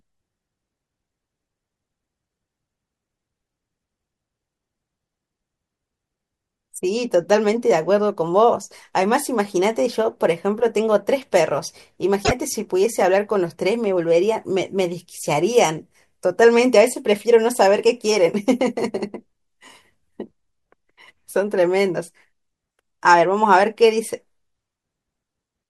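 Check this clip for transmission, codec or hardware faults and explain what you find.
One codec fault occurs, at 12.23 to 12.32 s, likely a broken MP3 bit reservoir: after frames went missing, the next frame reached back for borrowed bits and decoded another frame's bytes. The speech skips ahead, and the damaged stretch spans a few frames, consistent with roughly 24 ms frames.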